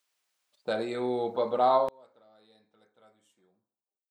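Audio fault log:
1.89–4.11 s, one channel inverted: from 1.89 s to the end the speech drops by about 30 dB, leaving a faint residue. The likely cause is reversed polarity on one stereo channel, so the shared centred content cancels on mono summing.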